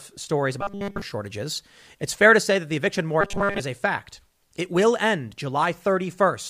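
Faint regular ticks run through this speech recording from 0.44 s to 6.44 s, roughly ten of them at about half-second intervals. These clock slip clicks are likely single samples dropped or repeated because two devices run on unsynchronised clocks differing by around 40 ppm. Twice, from 0.61 to 1.02 s and from 3.21 to 3.60 s, the voice becomes a rigid, metallic 200 Hz buzz that still loosely follows the speech. The first stretch is almost wholly affected and the second mostly. This robotic sound from repeated short buffers likely comes from starved input being filled by looping the last 5 ms of audio.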